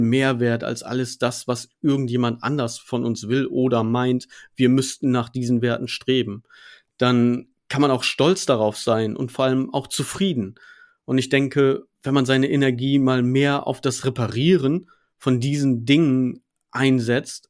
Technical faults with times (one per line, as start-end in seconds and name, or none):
none